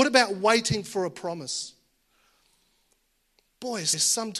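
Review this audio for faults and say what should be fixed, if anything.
Repeated frames: the speech at 1.54–1.58 s, just after "about waiting for a", replays a 42.7 ms block, and at 3.92–4.05 s a 128 ms block replays. Each is heard as a stutter. Prevent this by deduplicating frames by sequence number before writing.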